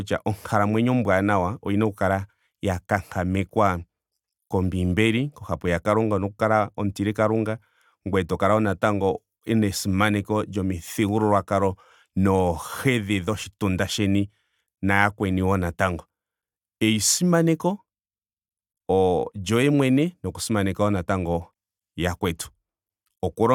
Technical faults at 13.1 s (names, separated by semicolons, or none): none